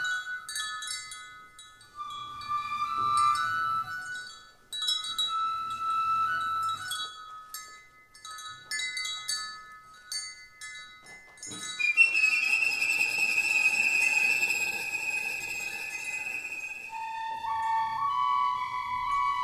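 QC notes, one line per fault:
Nothing to flag here; the audio holds together all the way through with no faults worth a line.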